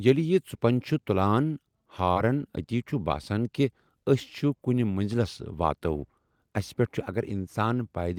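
From 2.12 to 2.17 s, just before "اتی چھُ باسن کہِ", the speech briefly smears. This is short concealed packet loss: about 40 ms of audio arrived too late, so the receiver extended the preceding sound to bridge the gap, then blended back into the real signal.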